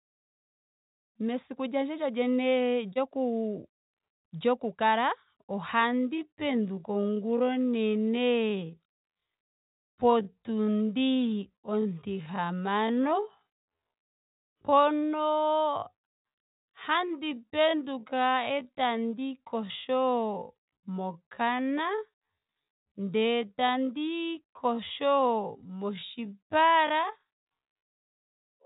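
At 2.93 s there is short concealed packet loss: about 30 ms of audio never reached the decoder in time, and the receiver continued the preceding sound, leaving a brief smeared wobble.

From 5.73 s to the end there is a time-stretched section, likely software slowing the audio to 0.565 times speed while holding pitch. The pace drops abruptly, and the narrowband sound, which has nothing above 4 kHz, drags.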